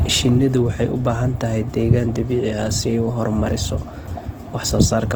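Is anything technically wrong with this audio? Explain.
Yes. Throughout the speech, the sound is grainy and rough, with a noisy, hashy texture in place of clean harmonic detail. The damage is plainly audible, yet the top end stays open, with content reaching about 20.2 kHz. This points to Opus compression in its music-oriented CELT mode, likely at a low bitrate around 16 kbps. Lacking bits, the encoder preserves each band's energy but fills fine structure with folded or noise-like content, which roughens tones instead of hollowing them out.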